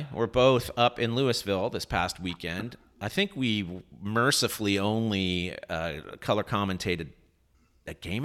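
No technical faults can be heard in this recording.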